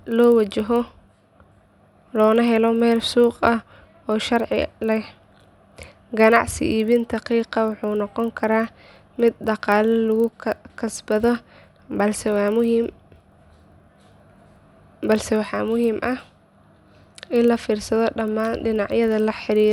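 From start to finish, a 25 Hz buzz rides under the speech. It stops in the pauses. This is a resampler restarted on every block. The audio was converted from 24 kHz to 48 kHz in separate 40 ms chunks. Each chunk was processed without knowledge of its neighbours. So every chunk boundary gets a small error. Those errors repeat 25 times a second. They merge into a buzz that follows the speech.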